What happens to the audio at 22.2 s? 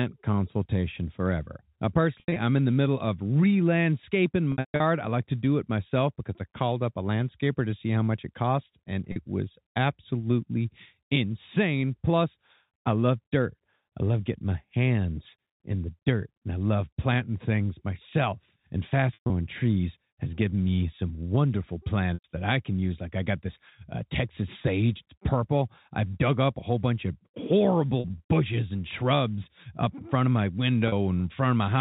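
At 22.14–22.24 s there is packet loss with pitch repetition: about 100 ms of audio drops out, which fits five 20 ms packets. The receiver repeats the last pitch period, so a held, buzzy tone fades out over about 50 ms toward silence before the speech cross-fades back in.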